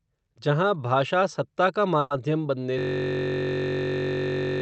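Speech carried over a call path with an upper limit near 8 kHz has two faults. From 1.99 to 2.13 s, the sound is stretched into a brief fading buzz or hiss for about 110 ms before carrying on where it left off, with nothing lost. This is a call audio freeze, most likely caused by delayed packets draining the jitter buffer, so the receiver filled the gap by extending the last sound, adding about 110 ms of delay. From 2.79 s to the end, the audio turns into a steady buzz at about 46.9 Hz. The same 21.33 ms fragment repeats over and over, a system hang loop: the computer or driver stalled while the sound hardware kept cycling through one ring buffer, and the length fits a 1024-sample buffer.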